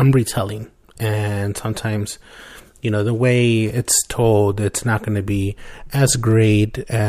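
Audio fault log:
Nothing stood out on listening to the speech in this recording.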